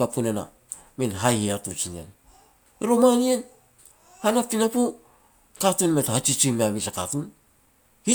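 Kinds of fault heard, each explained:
No technical fault can be heard anywhere in the recording. Nothing in the speech calls for an entry under any kind of fault.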